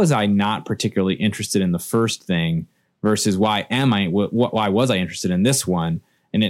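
Nothing jumps out on this speech recording: there's no point along the way where anything technical goes wrong or draws the ear away from the talking.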